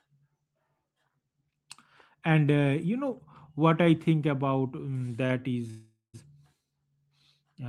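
At 5.26 s, just after "I think about um", there is a short stall from a late packet. A packet arrived late and the jitter buffer ran dry. The last sound is held for about 31 ms, then the speech resumes exactly where it left off.

From 5.70 s to 6.16 s comes a call audio freeze. The speech stops, and a fading buzz fills about 434 ms, ending in roughly 160 ms of silence. Packets held up in transit likely emptied the buffer. Nothing is lost. The audio picks up where it stopped, now later.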